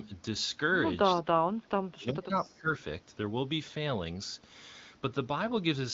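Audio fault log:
1.25–2.36 s and 2.52–2.71 s, speech suppressed in double talk: the voice is turned down in patches, about a second's worth in the first span with its deepest dip near 25 dB, then about 200 ms more, dipping about 15 dB. The likely cause is an echo canceller that, with both sides talking, could not tell the near talker from loudspeaker echo and attenuated both. Unlike packet loss, the sound dips and returns rather than dropping out with clicks or smeared fill.
2.43–2.52 s, echo leak: a faint copy of earlier sound, about 30 dB below the speech, arrives 378 ms late and lasts roughly 90 ms. Its likely source is a loudspeaker on one side of the call whose canceller let a scrap of the pickup through and sent it back. The fixed lag and a repeat of earlier sound separate it from reverberation, which trails directly off each sound rather than returning as a distinct late copy.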